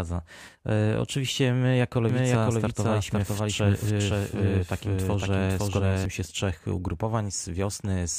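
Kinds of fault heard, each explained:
Doubled audio track: from 2.09 to 6.05 s the speech is heard twice, a second full-band copy trailing the first by about half a second at roughly the same loudness, so every syllable returns as a clean repeat with no decay or room colour. The copy cuts in and out abruptly at those edges. This is likely a second capture of the same signal through a slower path, or an edit holding two misaligned copies.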